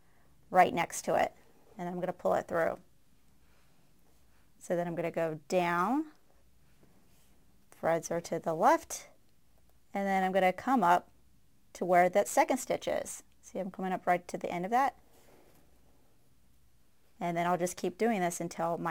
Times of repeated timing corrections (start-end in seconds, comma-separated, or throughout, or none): none